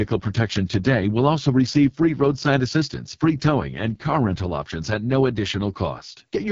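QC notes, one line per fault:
Throughout: AMR wideband (HD Voice) codec damage, heavy. The speech is rough and raspy, with the lowest bitrate point suggesting about 6.6 kbit/s. Its pulse-driven model of the vocal tract is too coarse here. A spectrogram shows a hard ceiling near 7.5 kHz and smeared, grainy harmonics above a few kHz.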